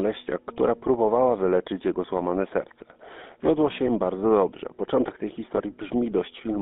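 Speech that has passed through the GSM full-rate codec for its whole length, with a plainly audible buzzy, gravelly roughness. The sound fits the 13 kbps full-rate codec. On a spectrogram, energy is confined to roughly 200 Hz to 3.5 kHz, and the harmonics look smeared and noisy rather than cleanly striated, because the codec drives a vocal-tract model with coarse, regularly spaced pulses. From 5.56 to 5.60 s, lost GSM frames cause a brief rough, metallic ring. This fits a single missing 20 ms frame being concealed by repeating the previous good frame's settings. A spectrogram shows a short smear of frozen, repeated spectral texture there, and the waveform shows a small blip of repetitive signal rather than the natural speech envelope.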